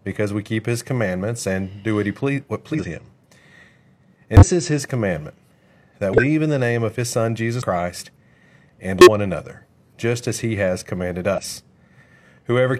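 Compressed frames are skipped six times in this speech. At 2.70 s about a fifth of a second of audio vanishes. At 4.37 s roughly 150 ms goes. At 6.13 s, just before "in the name of", about 300 ms is lost. Then 7.57 s drops around 100 ms. At 9.01 s, before "another just as he", about 300 ms disappears. Last, 11.29 s loses around 100 ms. Whole frames never reached the output, so the sound jumps forward at each join.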